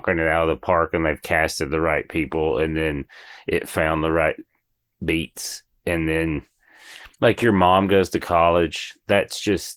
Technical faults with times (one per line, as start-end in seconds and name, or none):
1.94-9.77 adaptive stream at a lower bitrate